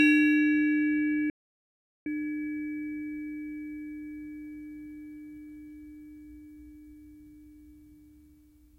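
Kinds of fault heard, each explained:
Audio dropout to silence: sound cuts abruptly to silence for 0.76 s, with no room tone, unlike a fade; likely a lost input.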